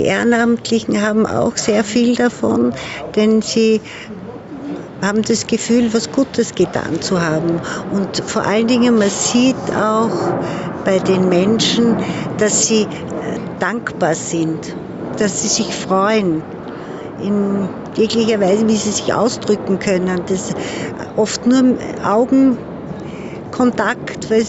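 Gain pumping runs through the whole clip, with the level swinging by something like 10 dB. Loud and quiet passages sit unnaturally close together, giving a squashed, breathing character. The likely cause is input gain set far too high, with a fast limiter or compressor clamping down on each peak. The top end stops near 8 kHz, consistent with a call codec path.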